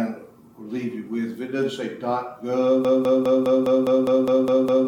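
From 2.85 s to the end, the sound falls into a broken-record loop: a 0.2 s fragment repeats exactly, back to back, about ten times, with no decay or variation as an echo would have, so the audio meant for those seconds is lost. This likely comes from a stalled player, encoder or stream resending its last buffer.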